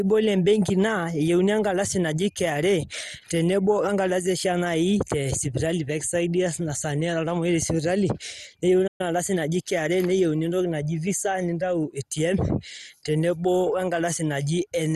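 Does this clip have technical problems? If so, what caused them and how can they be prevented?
Yes. Throughout the speech, the sound is dull, with a gurgling, granular edge. This is typical of MP2 compression, likely at a bitrate around 64 kbps. Too few bits forced the encoder to switch off the upper sub-bands and quantise the rest coarsely. On a spectrogram, the upper bands are missing, with blocky patches flickering on and off below them. Encoding at a higher bitrate, or with a more efficient codec, would prevent this.

From 8.87 to 9.01 s there is a playback stall. The speech stops in mid-flow for about 0.12 s and then continues. The likely cause is the player running out of buffered data or its output thread being blocked, so nothing reached the output until it recovered. On a waveform this shows as a flat line cutting abruptly through an active passage, and on a spectrogram as a narrow blank vertical gap across all frequencies. 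A larger playback buffer and a real-time audio thread that nothing else can block would prevent this.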